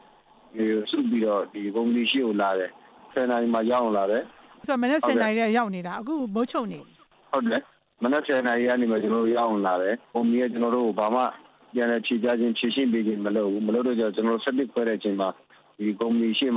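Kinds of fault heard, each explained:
No technical faults can be heard anywhere in this recording.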